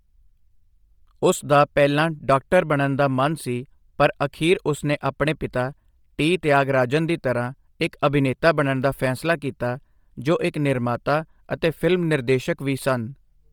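A speech recording with a breathy, grainy edge from start to finish, where the upper part of the spectrum sounds hissy rather than crisp, and nothing is present above 20.2 kHz. This heavy damage most likely comes from Bluetooth LC3 compression: the codec discards much of the high-frequency detail and replaces it with shaped noise. The texture fits LE Audio at a low bitrate around 32 kbps with 10 ms frames.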